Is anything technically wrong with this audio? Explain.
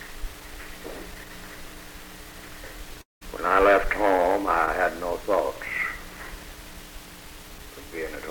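Yes. From 3.01 to 3.23 s, a likely long network dropout stretches the sound into a fading buzz, then silence, unlike a brief glitch. It resumes with 200 ms lost.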